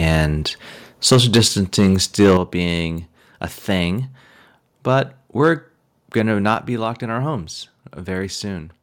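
Microphone overload at 0.11 to 0.21 s gives a faint crackle on a peak about 1 dB over full scale. A too-high input level likely flattened a small fraction of the waveform tops against the converter's limit. Microphone overload again from 1.07 to 1.41 s is much harsher, about 8 dB over, with around a tenth of the waveform squared off, likely from the same excessive input gain. At 1.12 s, a microphone volume step-down drops the level about 2 dB at once, likely the call software lowering the input gain in reaction to the clipping. Overload returns from 1.78 to 2.37 s, about 7 dB over, and sounds gritty and crackling, likely from peaks still hitting the converter ceiling. At 2.37 s, just before "being a thing", the volume steps down again by about 8 dB, an abrupt drop in voice and background that is likely a second automatic gain cut. At 6.54 s, between "we're going to" and "be locked in our", a further step down of about 5 dB audibly lowers the level in one jump, likely another input-gain reduction by the software.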